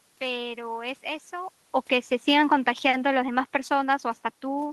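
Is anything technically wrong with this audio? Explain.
Yes. Automatic gain falling begins at about 2.15 s and continues to the end of the clip. The automatic gain control judged the input too loud, or its background noise too strong, and began pulling its gain down step by step rather than at once. The speech is loud at first and then sinks steadily, with the room noise behind it sinking by the same amount, which separates it from the talker simply moving, as happens around 1.5 s and 4.5 s.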